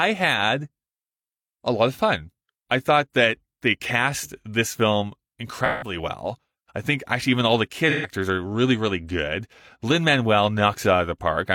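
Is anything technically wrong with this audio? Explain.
Yes. AAC frame loss with concealment occurs at 5.65 to 5.96 s and 7.90 to 8.11 s. These gaps of 171 and 128 ms fit about four and three lost frames. The decoder refilled them from the last good spectrum, so each patch sounds smeared, noisy or phasey.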